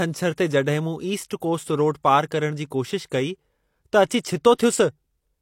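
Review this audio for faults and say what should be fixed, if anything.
Pre-echo at 4.21 to 4.25 s: a 40 ms hiss precedes a sharp onset, as the block's quantisation noise spills into the quiet before the attack. To prevent it, encode with a codec setting that switches to short transform windows on transients or applies temporal noise shaping.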